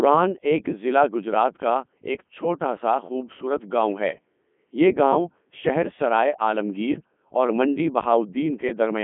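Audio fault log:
Throughout, Codec 2 vocoder: the speech has that robotic, buzzy quality you get when the decoder rebuilds the voice from sine waves driven by pitch, voicing and a rough spectral envelope instead of keeping the actual waveform. The damage is heavy, and the detail sounds like Codec 2's top 3.2 kbit/s mode. It sits in a narrow radio band of roughly 150 Hz to 3.4 kHz, with nothing at all above 3.6 kHz.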